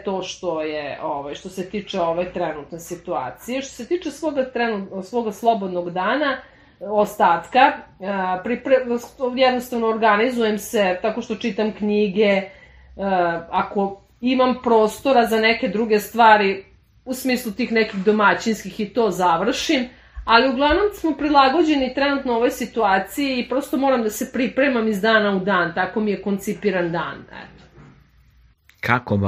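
From 20.86 s to 24.70 s there is Wi-Fi interference. A nearby Wi-Fi radio's beacon transmissions, repeating every 102.4 ms, are picked up and rectified by the audio circuit, producing a steady ticking just under ten times a second. The ticks sit very low, around 50 dB below the wanted sound, so they are faint. On a spectrogram they appear as evenly spaced thin vertical lines, and the waveform shows tiny regular spikes.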